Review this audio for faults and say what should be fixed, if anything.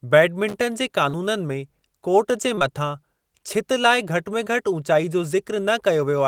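A burst of loose connector crackle runs from 0.48 to 0.54 s. A worn or dirty contact is opening and closing in quick succession, chopping the signal into fragments, and any DC on the line turns each break into a small pop. On a waveform this shows as a cluster of sharp, irregular spikes. On a spectrogram it appears as thin vertical broadband streaks across the full frequency range. Cleaning or replacing the connector and strain-relieving the cable would prevent it.

Short concealed packet loss occurs four times. At 1.09 to 1.15 s about 40 ms went missing. At 2.55 to 2.63 s there are two back-to-back gaps of about 20 ms each, at 2.55 and 2.59 s. At 4.45 to 4.57 s another 20 ms went missing, and the fill adds a few milliseconds of stretch. The gap sizes fit 20 ms packets. In each case the decoder covered the hole by extending the preceding sound, then cross-faded back into the real audio. 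On a spectrogram, harmonics flatten into static horizontal bands, or smeared noise replaces crisp detail, with a soft seam where the real signal resumes. On a waveform a short, unnaturally regular stretch appears. Adding a larger jitter buffer or forward error correction on the network link would prevent these dropouts.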